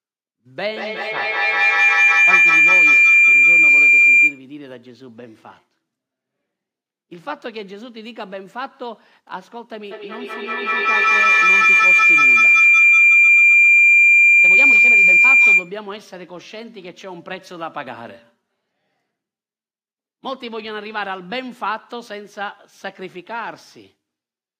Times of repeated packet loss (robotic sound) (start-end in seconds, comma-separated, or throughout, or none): none